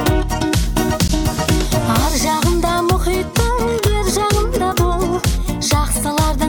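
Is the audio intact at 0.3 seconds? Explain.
Yes, the audio is intact at 0.3 seconds, with no dropout, click, distortion or other fault at that moment.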